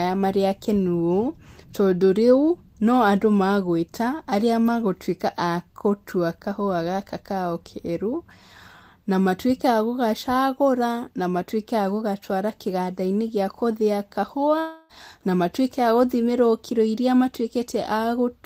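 A likely long network dropout in this speech recording cut off incoming audio from 14.59 to 14.91 s. The receiver papered over the roughly 0.3 s gap with a fading buzzy continuation of the last sound, so that stretch of speech is lost rather than silent.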